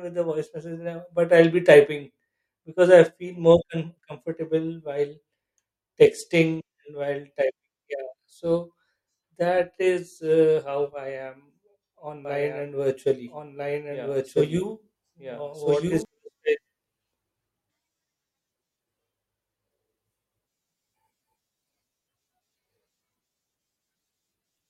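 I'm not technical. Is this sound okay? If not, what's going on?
No. From 12.25 to 16.05 seconds the speech plays twice: a second, equally loud copy follows about a second and a half behind and starts and stops abruptly. This is a doubled audio track, likely from the recording being captured twice along a slower route.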